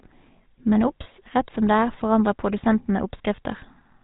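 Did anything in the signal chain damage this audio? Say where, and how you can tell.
Yes. The GSM full-rate codec colours the whole clip: nothing above 4 kHz, and a buzzy, gravelly roughness from the codec driving a vocal-tract model with sparse, regularly spaced pulses. The plainly audible damage fits 13 kbps coding somewhere in the call path.

Lost GSM frames show up at 1.04–1.07 s and 3.36–3.39 s as brief metallic rings. Each sounds like a single 20 ms frame replaced at the network stage by repeating the previous good frame's settings.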